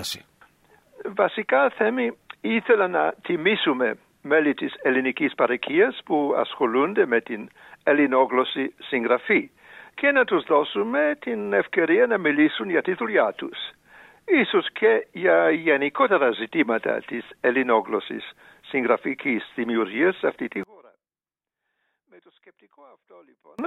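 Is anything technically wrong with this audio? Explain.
Yes. From 20.63 s to 23.59 s the sound collapses to a faint trace, about 32 dB quieter. The likely cause is one channel inverted. Reversed polarity on one side makes the shared content cancel when summed to mono, leaving only the channel difference.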